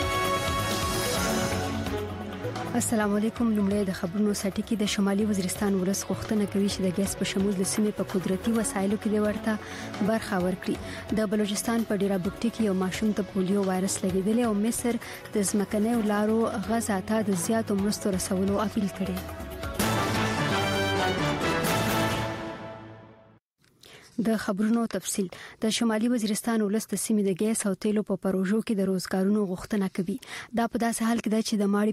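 No technical faults occur anywhere in the audio, so there is nothing to describe in time order.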